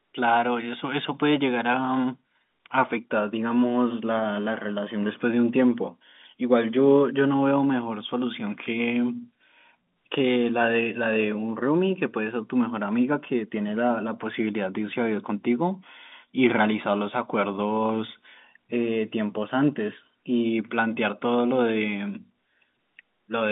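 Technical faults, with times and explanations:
Nothing faulty is heard in this telephone-band speech.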